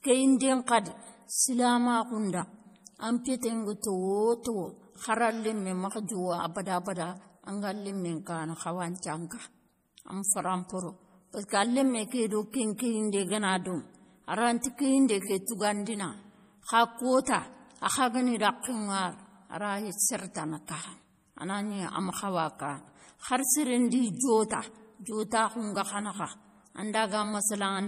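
MP3 compression runs through the whole recording. Nothing is left above 15.1 kHz, so the treble stops at a hard ceiling, and the damage is plainly audible: a watery, swirling texture and metallic chirps on sibilants, with consonant attacks smeared. The likely cause is an MP3 encoder short of bits, which fits a low bitrate of about 40 kbps. It cuts the top band and drops weak frequency lines that switch on and off between frames.

Pre-echo occurs at 0.67 s, where a short hiss spreading over about 16 ms runs just ahead of a sharp speech attack, and the onset itself sounds softened. The codec spreads its quantisation noise evenly across a transform block. Because this attack falls late in its block, noise sized for the loud part spills into the quiet moment before it.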